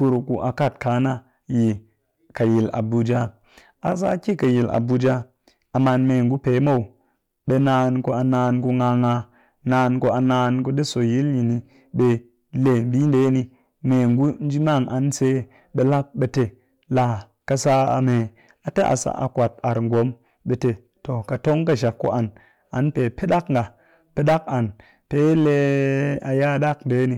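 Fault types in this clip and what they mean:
hard clipping: The speech carries a gritty crackle on its louder syllables from start to finish, with a rough, buzzy edge wherever the level peaks. The signal was driven about 8 dB beyond what some stage in the chain could pass, so the tallest peaks were sliced off flat, a small share of the waveform, around 3 percent. Those squared-off tops add high harmonics that were never in the original sound.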